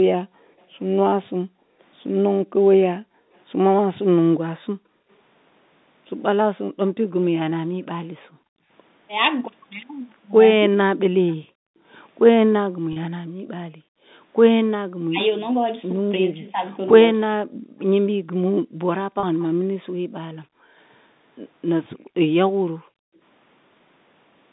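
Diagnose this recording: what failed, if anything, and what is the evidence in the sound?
The echo canceller in the call processing clamped the microphone while the far end played, gating the room background. From 0.26 to 5.09 s, 6.65 to 8.69 s, 11.38 to 14.11 s and 17.6 to 23.21 s, the ambience dips by up to about 40 dB, then recovers.

Speech was suppressed in double talk, likely because the echo canceller could not separate the near talker from the loudspeaker echo and attenuated both. At 10.7 to 10.82 s, and in pieces across 15.08 to 17.32 s, the talker's level drops by around 40 dB.

Echo leak, likely from incomplete cancellation at a loudspeaker end, returns a faint delayed copy of speech. At 11.28 to 11.35 s a scrap arrives about 305 ms late, roughly 35 dB down. At 19.39 to 19.44 s another arrives about 308 ms late, around 30 dB down.

Network packet loss was concealed by pitch repetition. 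At 12.93 to 12.96 s and 19.2 to 19.23 s, a 30 ms gap is bridged by repeating the last pitch period, giving a short held, buzzy tone before the speech resumes. Each gap fits a single lost packet.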